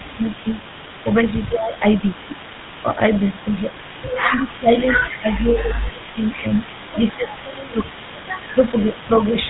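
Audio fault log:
Throughout: GSM full-rate codec, a buzzy, gravelly roughness from pulse-driven vocal-tract modelling at 13 kbps, with nothing above 4 kHz, unlike a cleaner band-limited narrowband line.
Throughout: echo leak, a faint delayed copy of the speech trailing 148 ms behind at about 20 dB down, likely loudspeaker pickup the echo canceller failed to remove.
0.00–0.48 s, 1.04–2.99 s, 4.19–7.87 s, 8.54–9.08 s: speech suppressed in double talk, the speech dips by about 5 to 15 dB in pieces rather than dropping out entirely, likely the canceller ducking during simultaneous talk.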